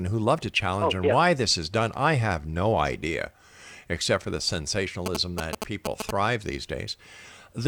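From 5.06 to 6.11 s the speech is overlaid by GSM signalling bursts. A 2G handset close to the recording chain is exchanging short control transmissions with its network, and an unshielded stage in the audio path rectifies the RF envelope into audible interference. The result is a galloping dit-dit-dit of brief buzzes pulsing at about 217 Hz, standing roughly level with the speech itself for that second or so.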